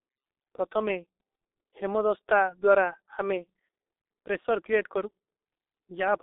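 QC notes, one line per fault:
Throughout: G.723.1 codec. Speech is muffled and hoarse, with nothing above 3.8 kHz and smeared consonants. The hoarse, blurred consonants set it apart from a plain telephone-band filter; the heavy damage fits a 6.3 kbit/s rate.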